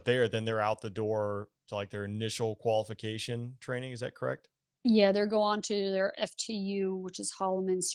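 There are no technical faults to describe at any point in the speech.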